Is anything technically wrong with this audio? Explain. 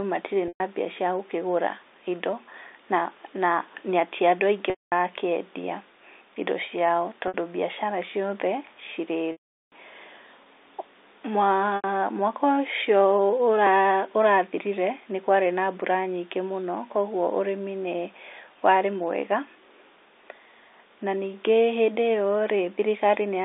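Yes. The speech shows packet loss with pitch repetition at 0.48 s (120 ms), 4.70 s (220 ms), 7.28 s (60 ms), 9.32 s (400 ms) and 11.76 s (80 ms). The receiver fills each gap by repeating the last pitch period and fading it over about 50 ms. The three short losses sound like a briefly held, buzzy tone. At 4.70 s and 9.32 s the repetition fades into silence before speech returns through a short cross-fade. The audio passes through G.711 telephone coding, which limits the band to about 300 Hz to 3.7 kHz.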